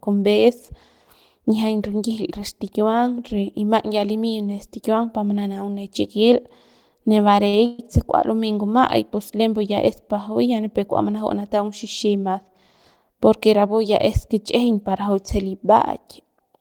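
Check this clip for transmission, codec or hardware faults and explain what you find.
Three packet-timing faults turn up in the speech, two close together and one later on.

From 7.49 to 7.54 s there's a short stall from a late packet. The jitter buffer ran dry, so about 40 ms of the last sound gets held with a faint buzz or dip before things resume.

From 7.66 to 7.80 s, just before "se kua lumey", comes a call audio freeze. Packets were likely held up in transit, so 130 ms of stretched, fading buzz fills the gap rather than silence.

From 12.05 to 12.43 s there's a jitter buffer speed-up. The receiver trimmed tiny pitch-period slices, around 40 ms in total, so the speech runs at about 109% speed, same pitch, sounding rushed.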